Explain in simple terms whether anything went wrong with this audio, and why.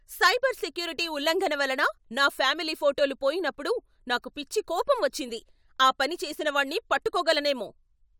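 Nothing went wrong; the recording has no audible faults.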